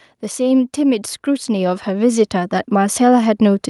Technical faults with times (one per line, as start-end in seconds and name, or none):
0.35-3.07 automatic gain rising